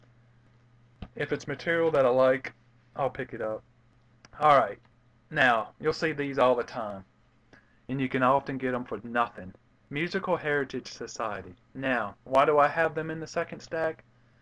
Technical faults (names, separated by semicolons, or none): none